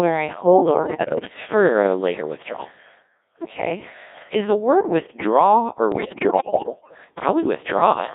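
Codec 2 vocoder damage runs throughout the speech, and it is heavy. The decoder rebuilds the voice from sine waves driven by pitch, voicing, energy and a coarse spectral envelope, so the original waveform is gone and the result sounds robotic and buzzy. The sparse detail fits the 1.6 kbit/s mode, and the sound sits in a band from about 250 Hz to 3.7 kHz.

Bit errors on digital voice radio strike from 0.80 to 1.34 s and again from 5.92 to 6.98 s, the second burst about twice as long. Roughly 15 percent of the bits arrive flipped. In a vocoder this lean, each bit steers a whole frame's pitch, level, voicing or spectrum, so the synthetic voice lurches in pitch, level and tone colour and breaks into bleeps, warbles and robotic gibberish.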